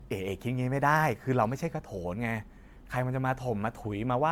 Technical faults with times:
0.00-4.32 generation loss

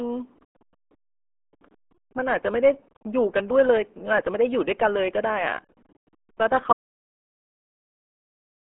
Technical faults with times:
0.00-8.79 RealAudio 14.4 codec
6.73-8.79 audio dropout to silence

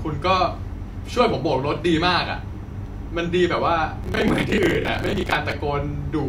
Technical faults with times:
4.03-5.52 processor overload crackle

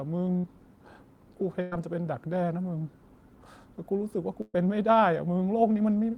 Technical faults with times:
0.37-0.45 burst of packet loss
1.61-1.73 burst of packet loss
4.41-4.56 burst of packet loss

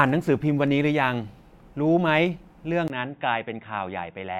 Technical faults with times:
2.88-4.39 input switched to a poorer device

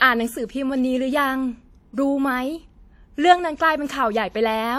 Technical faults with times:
0.00-4.79 WMA compression

